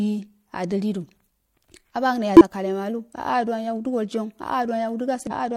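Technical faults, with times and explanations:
2.37–2.42 s and 5.27–5.32 s: damaged data in a compressed stream. A corrupted stretch of the encoded speech made the decoder misread frames and lose sync while it searched for the next valid frame header. Each event is a short blip of about 50 ms.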